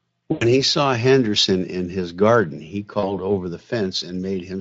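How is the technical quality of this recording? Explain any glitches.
The recording has two dropouts, both from VoIP packet loss concealed by the speech codec, at 0.31 to 0.56 s and at 2.99 to 3.23 s. The first loses about 100 ms of audio, the second about 40 ms. In each gap the decoder keeps repeating its last pitch and filter at falling gain, so the speech smears into a buzzy, fading tone. It stays weak for a moment after packets resume. On a spectrogram the harmonics run flat and dim instead of moving, and the waveform shows a decaying, repetitive stretch. The Speex coding around these gaps adds little audible damage of its own.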